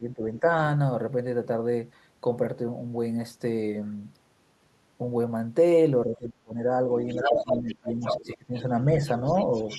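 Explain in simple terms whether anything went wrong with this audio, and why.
A couple of things go wrong here, both from a two-way call. The speech suppressed in double talk shows up as the talker dipping or cutting out: briefly at 0.0–0.22 and 0.4–0.47 s, nearly vanishing at 6.06–6.84 s, heavily again at 7.28–8.66 s, and slightly at 8.87–9.02 s. Most likely the echo canceller couldn't separate the talker from the far end while both spoke.

There's also the other side's voice leaking through. From 7.09 to 8.35 s it's about as loud as the talker, then a faint scrap at 8.56–8.63 s and a quieter stretch from 9.26 s to the end. That's the loudspeaker sound reaching the microphone, likely because the canceller didn't strip it all out.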